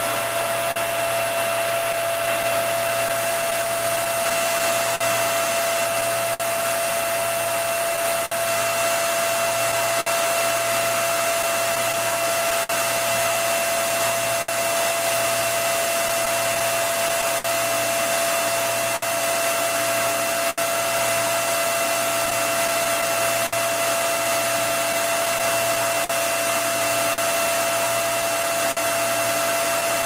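The sender's audio clock runs slow relative to the receiver's, by roughly 4 percent, throughout the clip. Audio arrives a little slower than it is played out, so the jitter buffer keeps draining. The receiver stretches the sound by repeating short pieces. This clock drift between sender and receiver comes through as small timing hiccups, little repeats and stumbles that recur at uneven intervals from start to finish.

From 0.71 s to the end, packets were lost or late one at a time, producing scattered short gaps, around fifty of them. At each hole the receiver concealed the loss by continuing the last sound it had. About a second of audio in all, roughly 4 percent of that stretch, is made up this way, and the longest patch is around 70 ms. Each gap is heard as a brief tick, a smear or a short dropout. The concealment also adds about 27 ms of length overall.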